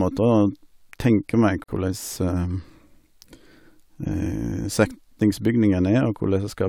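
A gap at a join of encoded pieces appears at 1.64 to 1.68 s: separately encoded segments were spliced untrimmed, leaving a gap of about 46 ms with smeared edges.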